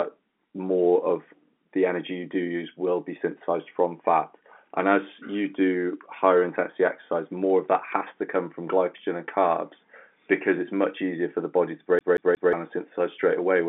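At 11.99 s, right after "for the body to", the speech sticks like a CD stuck on one turn. A scratch keeps throwing the laser back to the same spot. The same 180 ms slice plays three times, each jump marked by a brief mute, until 12.53 s.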